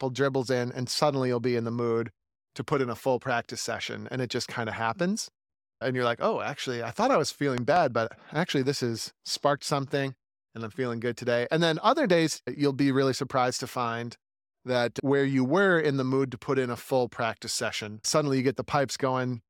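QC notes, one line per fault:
7.58–7.78 s, loud pop: a sharp double pop, two hits in quick succession roughly 15 dB above the speech level, lands between "I thought I was" and "but actually this has", with the talker continuing underneath. Each hit is a sudden voltage pulse added on top of the signal, its edge rounded by the downstream circuitry, likely from a plug, switch contact, static discharge or driver glitch.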